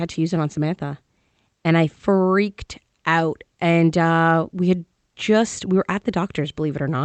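No technical faults occur anywhere in the speech, so there is nothing to place in time order.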